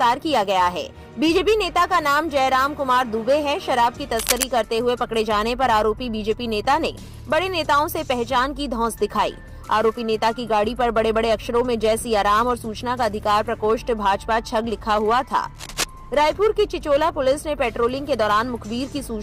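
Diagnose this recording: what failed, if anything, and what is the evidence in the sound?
The analogue wiring stage failed: a worn cable, connector or control was likely moved while recording, so its contact resistance jumped around rapidly. That produces cable scratch noise, dense uneven bursts of crackle laid over the sound, from 4.11 to 4.43 s and again from 15.55 to 15.86 s. Each burst lasts about 0.3 s and sits only about 5 dB below the signal, heard as a scratching rustle over the sound both times.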